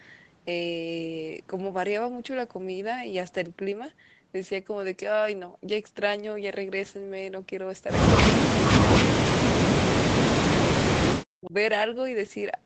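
From 8.3 to 8.42 s, 8.68 to 9.79 s and 10.0 to 11.54 s, the speech sinks by roughly 40 dB at its deepest, in short bursts at first and then for about one and a half seconds. This is speech suppressed in double talk: the echo canceller likely mistook the talker for loudspeaker echo while the far side spoke and pulled both down. The waveform shows the envelope collapsing in these spans, and the spectrogram, already empty above 8 kHz, goes nearly blank.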